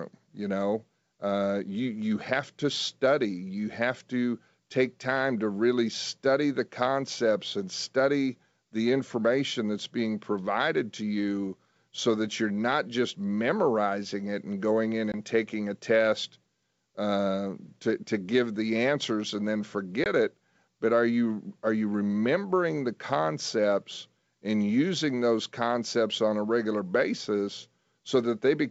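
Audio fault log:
15.12–15.14 s and 20.04–20.07 s, packet loss on an ADPCM call: 20 ms silent holes after "it and going in" and "the answers and then"; the decoder's predictor drifts, so speech returns slightly off until it resyncs.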